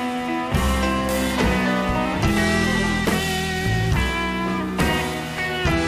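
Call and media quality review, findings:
No call or media quality findings to raise in this review.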